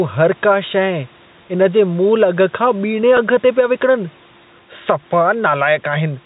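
Gain pumping runs through the whole speech clip. The level swings by about 5 dB. Loud and soft syllables sit closer together than they should. The likely cause is input gain set far too high, with a fast limiter or compressor pulling the level down on every peak. The result sounds squashed.

At 3.17 s there is a packet loss with pitch repetition. About 10 ms of audio is missing, which points to a single lost packet. The receiver filled the gap by repeating the last pitch cycle. The loss is short, so it comes across as a brief held, slightly buzzy tone. The speech then resumes without a silent gap. The narrow telephone band of the G.711 link remains audible throughout.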